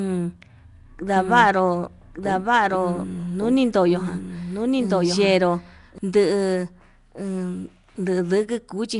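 From start to finish the speech carries plainly audible codec damage, most likely Nellymoser compression: fixed-rate block coding leaves weak bands empty and fills them with noise, giving a rough, hissy halo and an underwater smear rather than the metallic warble of MP3, with nothing above 10.6 kHz, which fits a bitrate near 44 kbps.

From 1.16 to 5.98 s a doubled audio track runs underneath, likely a second, slower capture path mixed back in: a full-band copy trails by about a second at a few dB lower, with no decay or room colour, and it starts and stops abruptly, unlike a reverberant echo.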